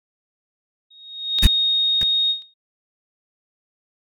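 At 0.90 s a loudspeaker feedback squeal starts: the microphone is hearing its own speaker, and the loop gain at 3.7 kHz rises above one. The tone swells over roughly half a second to around 10 dB above the speech and holds until 2.54 s. A spectrogram shows it as a single bright horizontal line.

Two small jumps in the speech fall at 1.39 s and 2.42 s, most likely dropped buffers (overruns), where unread samples were overwritten and the audio spliced straight across. Roughly 20 ms and then 10 ms go missing, leaving waveform discontinuities and thin vertical streaks on the spectrogram.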